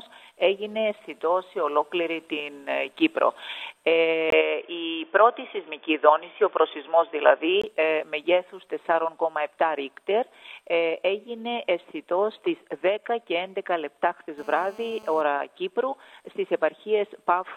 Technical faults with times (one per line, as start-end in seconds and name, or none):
4.30-7.64 input switched to a poorer device
14.38-15.21 GSM phone buzz